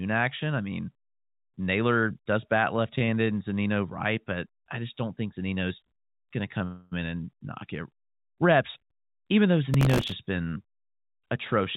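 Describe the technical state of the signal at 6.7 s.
At 6.7 s the speech halts and the last sound is drawn out as a fading buzz, filling about 267 ms from 6.65 to 6.93 s before speech picks up again at "in and knock it" with nothing lost. This is a call audio freeze, likely caused by packets arriving late so the jitter buffer ran dry and the receiver stretched the final sound until they came, leaving the rest of the speech about 267 ms later than before. Throughout, the band stops at 4 kHz, which fits a narrowband G.711 call.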